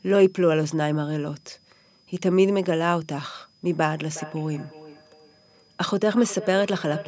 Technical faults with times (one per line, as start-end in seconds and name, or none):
4.10-7.08 feedback echo between two devices